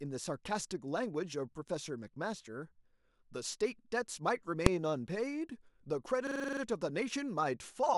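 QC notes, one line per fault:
4.66 s, invalid numbers at full scale: a single sharp bang, as a roughly 1.3 ms block of invalid values was pinned to full-scale output.
6.27–6.61 s, system hang loop: a machine-gun stutter at 23.4 Hz as a 42.67 ms piece repeats eight times, fitting a 2048-sample buffer replayed while the system froze.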